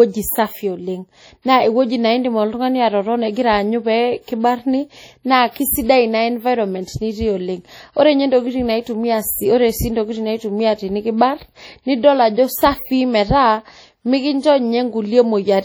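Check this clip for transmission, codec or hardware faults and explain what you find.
One codec fault runs through the whole speech clip. Throughout, the speech sounds ringing and washy, with hiss that swells and fades with it. This is likely WMA compression: long transform blocks smear quantisation noise over tens of milliseconds, consistent with a low rate around 32 kbps.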